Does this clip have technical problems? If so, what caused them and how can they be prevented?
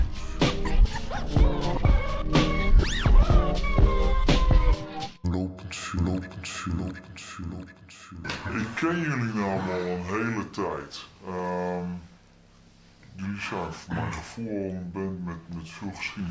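Yes. The whole clip runs slow and sits low: everything plays at about two-thirds of its proper speed, and pitch drops by about 7 semitones to match, so the sound drags and turns heavy and dark. This is a wrong sample rate fault. The samples are played back more slowly than they were captured, with no conversion between the two rates, which fits audio recorded at 24 kHz being played at 16 kHz. To prevent it, read the file's true sample rate and resample to the output device's rate before playback.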